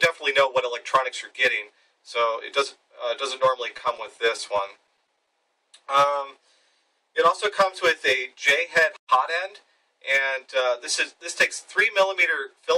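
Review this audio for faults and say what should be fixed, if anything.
Repeated stalls (stutter) run from 3.68 to 5.28 s. The jitter buffer ran dry 17 times, each gap 16 ms or shorter. The receiver extended the last sound to fill about 170 ms, roughly 11% of that span, so nothing is lost but the audio drags. On a spectrogram this appears as a string of brief frozen, smeared slices, and the waveform shows short repeated cycles. A deeper adaptive jitter buffer and steadier packet delivery would prevent it.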